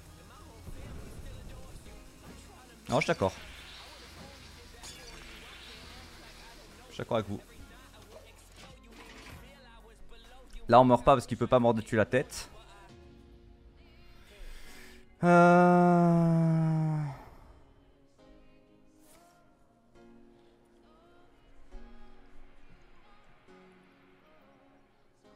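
No technical faults can be heard anywhere in this clip. Nothing in the audio calls for a timestamp or a closer look.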